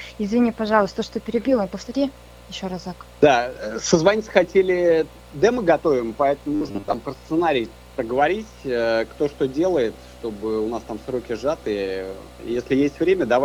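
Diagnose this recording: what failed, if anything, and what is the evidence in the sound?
Between 6.55 and 6.94 s the sound collapses into a rigid, metallic buzz at a fixed 100 Hz, a robotic sound from repeated short buffers. The likely failure is at the driver or buffer stage: audio arrived too slowly, so a 10 ms chunk was replayed to fill the gaps, with about half of that stretch being repeats rather than new audio. A spectrogram would show evenly spaced horizontal lines at multiples of 100 Hz, and the waveform would show near-identical 10 ms cycles.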